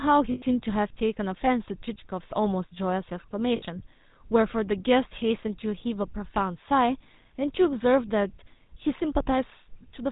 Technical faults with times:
0.00-10.12 GSM full-rate codec
0.32-0.60 lost GSM frames
3.56-3.63 lost GSM frames

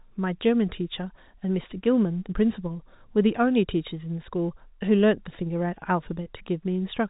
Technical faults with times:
none

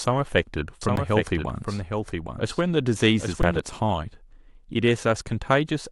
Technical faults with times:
0.81-3.59 doubled audio track
0.96 underrun with held sample
3.42 underrun with held sample

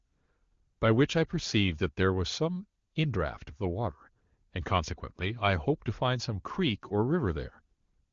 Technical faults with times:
none

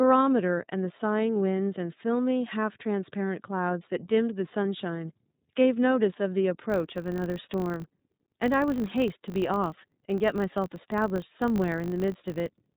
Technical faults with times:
0.00-12.77 iLBC codec
6.70-12.77 filter restarted on every block

